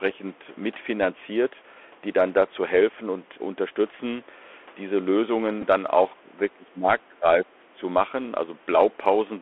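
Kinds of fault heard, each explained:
Bluetooth CVSD headset codec: one-bit adaptive coding, which fits 64 kbps, confines the sound to about 300 Hz–3.4 kHz and adds granular hiss and scratchy sibilants, unlike clean telephone band-limiting.
Bluetooth headset packet repeated: at 5.61–5.64 s, about 11 ms of lost audio is refilled by re-decoding old bits, which fits three repeated 3.75 ms packets, giving a brief buzzy tick rather than silence.
Speech suppressed in double talk: at 6.16–6.88 s and 7.09–7.76 s the voice dips by up to about 15 and 20 dB, likely echo-canceller suppression, as level loss without any buzz.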